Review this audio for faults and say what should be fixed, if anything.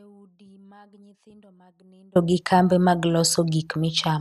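The clip opens with an audio dropout to a faint residue already under way: from the start until about 2.16 s the speech is missing, and all that's left is a faint leak of it sitting roughly 35 dB below normal level. Then it snaps back in abruptly rather than fading up. The likely cause is the signal feed breaking upstream while the chain after the break stayed live. To prevent it, check cable and connection integrity before recording starts.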